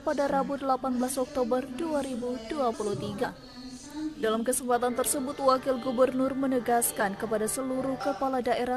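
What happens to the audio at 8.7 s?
Nothing goes wrong at 8.7 s; the audio plays through that moment intact, with no dropout, click, or distortion.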